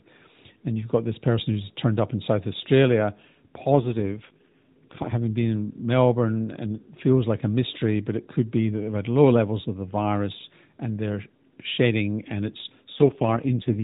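At 3.70 s the speech turns rough and buzzy. This is an AMR rate drop. The mobile codec falls from its normal rate, which sounds like 12.2 kbps, to a rate that fits 4.75 kbps. Fewer bits describe each frame, so the voice turns rough and synthetic. The band stays narrow and there is no gap. Normal quality returns at 5.13 s. The same drop hits again from 12.92 s to the end.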